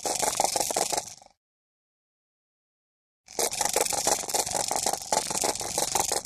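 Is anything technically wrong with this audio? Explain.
Yes, there are three kinds of fault.

Channel delay (doubling), throughout: one channel runs about 43 ms late, which fits a 2048-sample buffer. When summed to mono, every sound is followed by an equal-level slap copy.

Loud pop, at 0.31 to 0.33 s and 4.19 to 4.33 s: a voltage pulse, likely from a plug, switch or driver glitch, enters the signal. This gives a sharp single pop well above the sound, then a quick pair of pops later.

Compressed frames skipped, at 0.70 to 0.72 s: about four 23.2 ms frames are never decoded, so roughly 100 ms of audio is jumped over.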